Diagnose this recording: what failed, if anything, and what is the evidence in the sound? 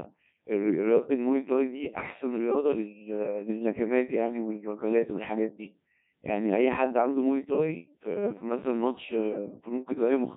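The failure is at the codec stage: a Codec 2 vocoder runs through the whole speech clip. The voice is robotic and buzzy, heavily damaged throughout. The decoder rebuilds speech from sine waves using only pitch, voicing and envelope. The result fits a low rate near 1.6 kbit/s.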